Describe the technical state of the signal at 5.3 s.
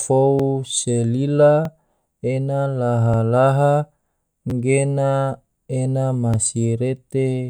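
The signal at 5.3 s is intact, with no audible fault at that moment.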